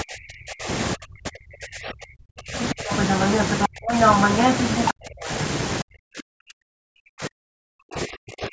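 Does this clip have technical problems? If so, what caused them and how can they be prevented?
Yes. Speech suppressed in double talk, likely from an echo canceller that couldn't tell the talker from loudspeaker echo, ducks the speech by up to about 40 dB at 0.02–0.69, 0.95–2.9, 3.67–3.91, 4.93–5.29 and 5.82–8.52 s. Using a headset, or a better-tuned echo canceller with proper double-talk detection, prevents this.

The other side's voice leaking through, likely from residual loudspeaker echo the canceller failed to remove, comes through at 2.9–3.68 and 3.9–4.91 s, at roughly 5 and 10 dB relative to the speech. Headphones or lower loudspeaker volume would stop it.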